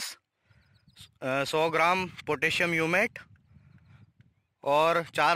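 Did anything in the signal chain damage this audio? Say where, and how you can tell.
Yes. The damage is crude rate conversion at the sample-format conversion stage, lasting the whole clip. A gritty, inharmonic fizz rides on loud and high sounds, roughly 25 dB down. Its pattern points to 44.1 kHz converted to 48 kHz by repeating nearest samples without filtering.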